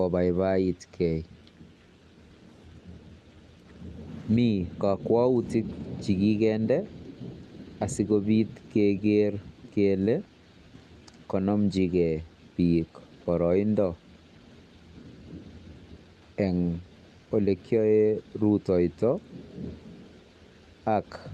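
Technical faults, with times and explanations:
No technical faults are present, so there are no times or explanations to give.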